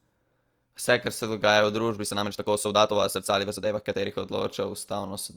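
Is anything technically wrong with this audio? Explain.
Yes. From 1.94 to 4.06 s there is a time-stretched section. The speech abruptly runs about 1.62 times faster, sounding rushed, yet its pitch does not rise as it would with a simple speed-up. That points to software that likely dropped short slices to shorten the passage.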